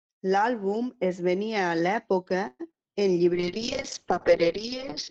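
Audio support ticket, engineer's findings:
Call audio freeze, 2.47–2.69 s, right after "es venia a l'època". About 120 ms of fading buzz extends the last sound, then the audio resumes where it stopped. Nothing lost, delay grows about 120 ms. Likely jitter buffer underrun from delayed packets.

Short concealed packet loss, 2.71–2.74 s, same spot. Brief smear lasting about 20 ms. The decoder never got those packets and the receiver synthesized a continuation of the preceding sound, then blended back. Component: network path plus decoder concealment.

Call bitrate drop, 3.33 s to end, after "venia a l'època en". Sound turns muffled and rough. Encoder cut from 32 to 6 kbps following a bandwidth estimate fall, with the audio band narrowed from 20 kHz to 6 kHz. Bottom rate held about 1.5 s.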